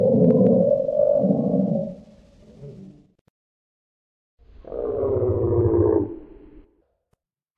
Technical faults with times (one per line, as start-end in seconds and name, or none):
none